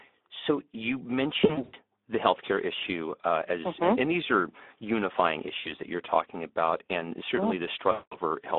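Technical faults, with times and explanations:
Throughout: Speex codec. The speech sounds hoarse and grainy, with noisy vowels, because this low-rate CELP coder, at a bitrate of about 11 kbps, has too few bits to describe the excitation. Its narrow line band runs from 250 Hz to 3.6 kHz. On a spectrogram, energy stops at about 3.6 kHz and thins below 250 Hz, and the harmonics look smeared and noise-filled. The waveform looks coarser than clean speech.
1.41–1.74 s, 5.59–5.72 s, 7.91–8.17 s: VoIP packet loss concealed by the speech codec. Audio packets went missing, and the decoder filled each gap by repeating its last pitch and filter at falling gain. This stretches the sound into a buzzy tone or a coloured noise that fades. The first gap loses 200 ms scattered over 320 ms, with its longest run 100 ms. The second loses 60 ms, and the third loses 200 ms. Spectrograms show flat, repeated patterns that dim, and the waveform shows a shrinking, regular envelope.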